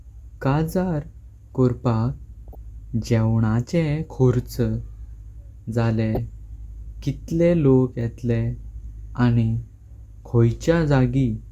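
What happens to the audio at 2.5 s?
That's DAB burbling, from 2.48 to 2.55 s: a few bit errors slip past error correction, so wrong samples put short blips of noise into single sub-bands over the speech.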